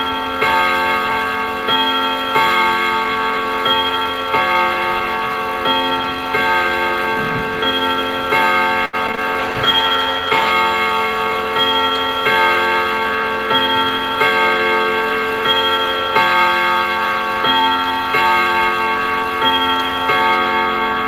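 A recording of everyday sounds with two call-path faults close together. From 8.85 to 9.19 s there is repeated packet loss, heard as robotic, choppy sound: four gaps (the longest 77 ms) are patched by stretching the preceding audio, so the waveform shows smeared repeats and brief dropouts. From 9.41 to 10.59 s a call bitrate drop makes the sound rough and muffled. On a spectrogram the upper frequencies vanish abruptly, which fits the encoder falling from about 32 to 14 kbps.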